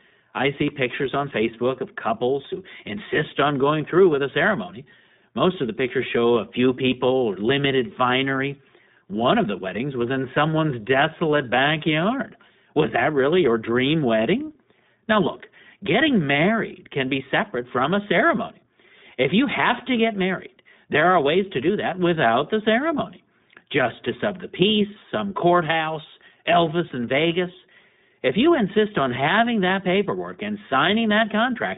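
Speech throughout sounds narrow, boxy and slightly rough and synthetic, with plainly audible iLBC codec damage. Nothing passes above about 3.8 kHz, and the band sits roughly between 150 Hz and 3.7 kHz, consistent with the 15.2 kbps, 20 ms frame mode.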